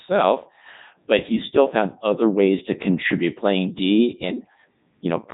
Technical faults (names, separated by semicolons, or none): Codec 2 vocoder